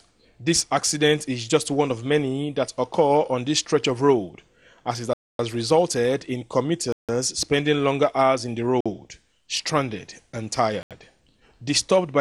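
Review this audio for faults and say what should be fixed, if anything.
Bluetooth stall dropouts occur at 5.13 to 5.39 s, 6.92 to 7.09 s, 8.81 to 8.86 s and 10.83 to 10.91 s, with gaps of 0.26, 0.16, 0.05 and 0.08 s. The sound cuts to silence and then resumes. The likely cause is radio interference delaying packets until the receiver's buffer emptied. To prevent this, keep the link short and unobstructed, away from 2.4 GHz congestion, or use a wired connection.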